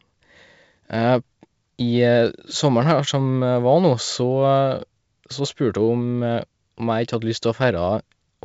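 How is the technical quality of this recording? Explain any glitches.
Nothing here counts as a glitch: the speech comes through G.722 wideband telephone coding at 64 kbit/s, and any trace that coding leaves is faint at most.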